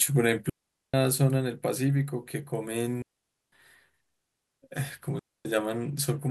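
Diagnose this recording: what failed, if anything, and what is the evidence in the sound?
The speech drops out three times in a digital wireless dropout at the radio-link stage: 0.50 to 0.94 s (441 ms), 3.02 to 3.52 s (503 ms) and 5.19 to 5.45 s (259 ms). Each time the receiver lost too much data and muted with a very brief fade rather than passing corrupted audio. The waveform shows flat near-silent gaps with no spikes at either edge, and the spectrogram shows clean vertical blank columns with no broadband noise bursts.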